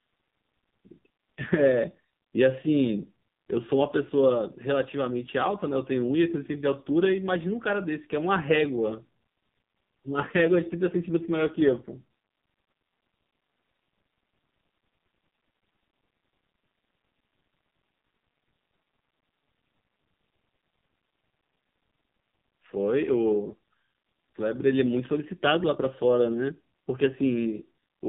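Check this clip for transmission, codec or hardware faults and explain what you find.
The clip has one codec fault. AMR narrowband mobile codec damage runs throughout: speech is confined to roughly 150 Hz to 3.7 kHz, and heavy buzzy, synthetic coarseness points to a low 5.9 kbps mode.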